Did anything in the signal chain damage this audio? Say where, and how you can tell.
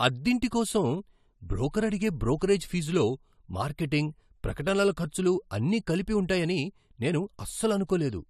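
Yes: codec pre-echo at 2.39 s, just before "ఫీజులో మార్కెటింగ్", a 25 ms hiss leads the attack, because transform-block quantisation noise spread backward; unlike a click, it precedes onset and smears.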